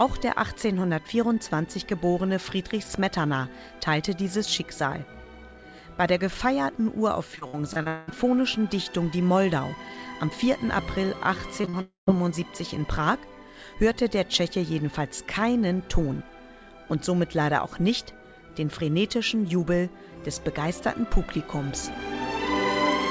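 From 7.36 to 8.09 s the sound turns choppy: repeated packet loss, with seven holes in about 0.73 s, the longest about 0.2 s. Each hole is bridged by stretching the preceding sound, so roughly half the stretch is synthetic. On a spectrogram this looks like short blocks of smeared, repeated harmonics alternating with normal texture. The waveform shows chunks that repeat cycle-for-cycle, with seams where real audio resumes.

At 11.61 s come three back-to-back short concealed packet losses, running to 11.75 s: gaps of 20, 20 and 40 ms, each papered over by extending the last sound and cross-fading back. They come across as a quick wobble and smear rather than clean gaps. On a spectrogram they show as a brief blurred patch where fine detail stops changing. The waveform shows a slightly too-regular stretch.

From 11.81 to 12.09 s a gap of about a quarter second opens, most likely a long network dropout. 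The last sound carries on as a fading buzz or hiss, then about 0.14 s of silence before audio resumes with that part missing. A spectrogram shows a decaying smear followed by a blank column. The waveform tapers to a flat line before jumping back.

The G.722 call path is audible as an empty band above 8 kHz, at a 64 kbps setting.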